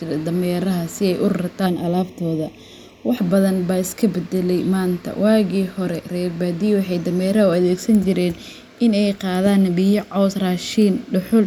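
From 1.67 to 3.17 s, one channel runs late by roughly a third of a millisecond and the two channels are folded to mono, producing channel delay (comb filtering). Because the delayed copy adds to the original, components they share cancel at evenly spaced frequencies, the first notch sitting around 1.5 kHz and further ones repeating above it. The speech turns hollow and phasey, with a fixed coloration across that stretch.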